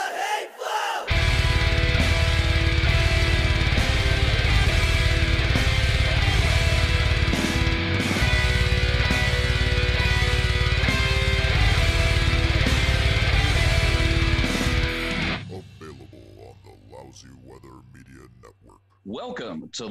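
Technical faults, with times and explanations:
No technical faults found anywhere in the clip.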